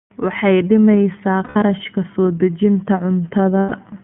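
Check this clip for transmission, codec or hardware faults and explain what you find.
Two faults are present: the whole clip passes through the iLBC codec, and iLBC frames are lost twice.

The iLBC codec shapes the entire clip. The audio is confined to a telephone band of roughly 150 Hz to 3.4 kHz, so the top end is dull. The speech sounds rough and slightly synthetic, and the codec damage is plainly audible. iLBC codes each frame's excitation independently, and the grain here fits its 13.33 kbps mode with 30 ms frames.

Lost iLBC frames occur from 1.44 to 1.56 s and from 3.60 to 3.73 s. Each gap lasts about 120 ms, which fits four consecutive 30 ms frames going missing. The decoder fills each hole by repeating the last pitch cycle mixed with noise. This makes a brief held, buzzy vowel where speech should change. Because iLBC frames stand alone, the speech recovers almost immediately after each gap.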